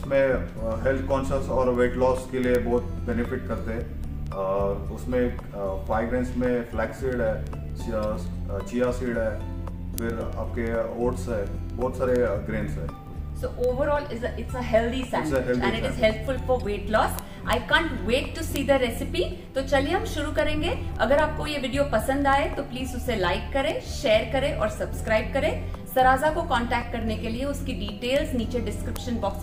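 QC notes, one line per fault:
0.15–29.42 s, word clock ticks: about ten sharp ticks a second, each one sample slipped by an unlocked receiver clock; the steady spacing sets them apart from random clicks.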